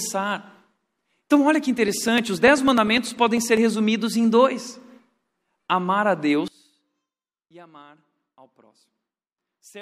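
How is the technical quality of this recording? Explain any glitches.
The recording has two distinct faults.

From 1.78 s to 3.57 s, just after "olha que" and before "resumidos em dois", there are periodic USB or driver dropouts. About every 0.1 s, roughly half a millisecond of audio is skipped, around twenty times in all, as a background task stalls the audio path. The result is a steady tick train heard only over sound, unlike random crackle.

From 6.48 s to the end, starting after "amar a", the speech sinks by about 25 dB to a faint residue. This is likely one channel inverted, so the shared centre content cancels when the channels are summed to mono. Unlike a mute or dropout, a faint ghost of the sound remains.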